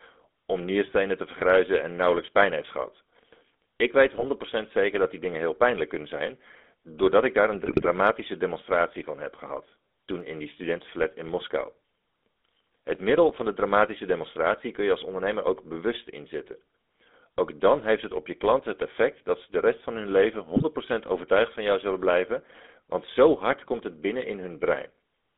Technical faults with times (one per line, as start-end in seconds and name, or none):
0.00-25.38 GSM full-rate codec
4.15-4.24 GSM bit errors
7.66-7.87 GSM bit errors
20.54-20.63 GSM bit errors